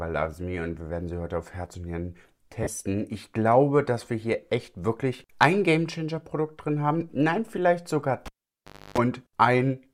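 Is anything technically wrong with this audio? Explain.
Yes, there are two faults.

From 2.63 to 2.67 s, about 40 ms of lost LE Audio frames, which fits four 10 ms LC3 frames, are concealed by the decoder repeating the last spectrum with randomised signs. The result is a brief noisy smear in place of the tonal content.

From 8.26 to 8.98 s, the cable is pulled and plugged in. A pop opens roughly 0.67 s of near silence. During that gap, about 0.29 s of 50 Hz mains buzz comes through while only the plug tip makes contact, and a second pop follows as the signal returns.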